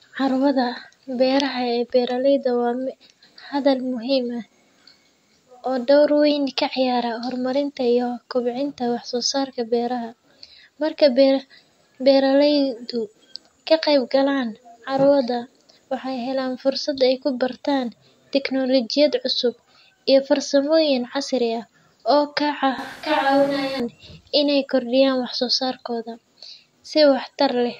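A speech recording in which the sound turns abruptly roomy and hollow, with thinner bass, from 22.78 to 23.80 s, then snaps back. The level barely changes, but background noise rises to around 25 dB below the speech, likely a switch to a distant microphone.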